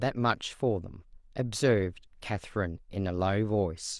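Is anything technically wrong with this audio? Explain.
No, nothing technical stands out here; the speech comes across steady and intact, with nothing that catches the ear as a problem.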